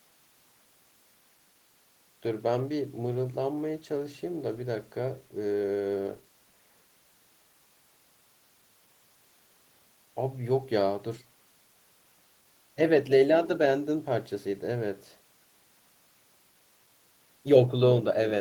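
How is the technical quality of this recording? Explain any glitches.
No technical faults can be heard anywhere in the recording, and the speech signal comes through steady and intact.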